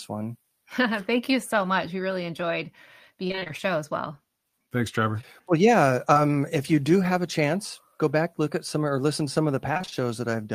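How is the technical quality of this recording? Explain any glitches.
The recording is marred by packet-loss glitches in four places.

Repeated packet loss (robotic sound) hits at 3.27–3.51 s (six gaps) and 9.73–9.94 s (five gaps). In each stretch, roughly half the audio is filled in, with no gap longer than 24 ms. The decoder keeps extending the last sound across each hole, so the speech turns choppy and robotic.

Short concealed packet loss occurs at 5.21–5.25 s and 6.13–6.17 s, each losing 20 ms. The receiver bridged these gaps by continuing the preceding sound and blending back in. This produces a brief smear or wobble, and a short consonant can disappear.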